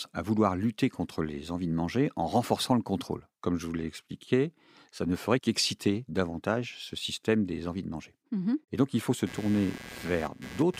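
From 9.26 s to the end of the clip at 10.79 s, right after "donc il faut se", a buzzing, scratchy pulse at roughly 150 Hz appears, sitting around 15 dB below the speech. This is computer activity noise: processor or graphics load shifting the ground shared with the audio circuit. Unlike steady mains hum, it starts abruptly and its texture follows the machine's activity rather than the speech.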